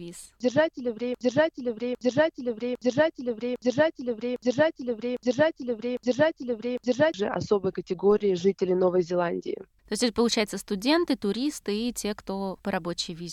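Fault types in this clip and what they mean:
Broken-record loop: from 1.15 to 7.14 s an 804 ms fragment repeats exactly, back to back, seven times. The source most likely stalled and kept resending what it held, so whatever should have played during those six seconds is gone.
DC step: at 8.11 s the waveform's zero line jumps, which you hear as a single low thump while the sound carries on unchanged. The offset then dies away gradually, the way it would with a highpass around 5 Hz.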